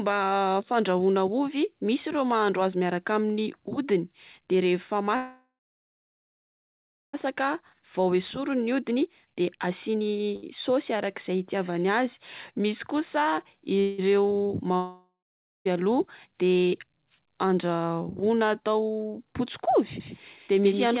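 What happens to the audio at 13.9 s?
At 13.9 s a call audio freeze is under way, running from 13.80 to 14.00 s. Packets were likely delayed in transit, draining the jitter buffer, so the receiver stretched the last received sound into a fading buzz or hiss for about 182 ms instead of going quiet. When the packets arrived, playback resumed exactly where it had paused. Nothing was lost, but the rest of the audio now runs about 182 ms later, with a brief smeared hold inserted before it.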